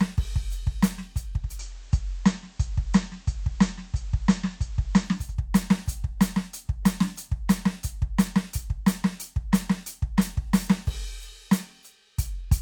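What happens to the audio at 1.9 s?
At 1.9 s the music has gone slightly hissy. A steady hiss sits roughly 30 dB below the music, and the level has shifted by about 1 dB. This is digital radio blending to analogue: the receiver lost its digital stream at 1.31 s and cross-faded over 0.39 s to the station's band-limited FM broadcast. It blends back to digital at 5.38 s.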